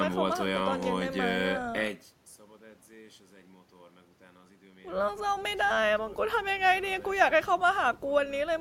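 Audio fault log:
Nothing stood out on listening to the speech.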